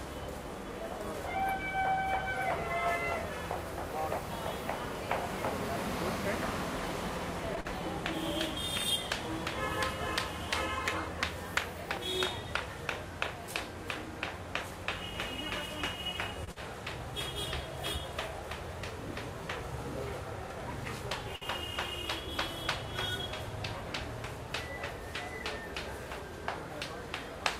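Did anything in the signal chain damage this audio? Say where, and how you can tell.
Yes. Short concealed packet loss on the network, at 7.61 s and 16.52 s. About 40 ms never arrived. The receiver continued the previous sound, leaving a brief smear.

Short stalls from late packets at 16.44 s and 21.36 s. The jitter buffer ran dry. The last sound was held for 33 ms and 56 ms, respectively.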